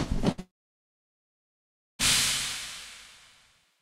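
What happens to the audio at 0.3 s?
At 0.31 s a burst of packet loss begins and lasts until 0.40 s. The receiver covers the 63 ms gap by extending the last sound and fading it down, and when playback resumes about 60 ms of the original audio has been skipped.

From 0.40 s to 2.01 s the sound cuts out for about 1.6 s, which points to a long network dropout as the likely cause. After a brief concealed tail, roughly 1.5 s is silent, and the sound returns at 2.01 s with about 1.6 s of material missing.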